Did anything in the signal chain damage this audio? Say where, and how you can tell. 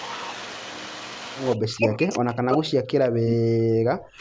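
Yes. At the call-processing stage there's an echo leak at 0.04–0.33 s and 3.27–3.33 s: a copy trailing 163 ms behind, roughly 25 dB and 15 dB below the speech, likely an echo canceller missing loudspeaker pickup.

Speech suppressed in double talk shows up at 1.58–2.98 s and 3.15–3.39 s, with the voice dipping by around 40 dB. That's likely the canceller ducking its own talker along with the loudspeaker echo.

From 3.67 s to the end, the background is gated by the echo canceller. The room sound drops by about 40 dB while the canceller clamps the mic hard.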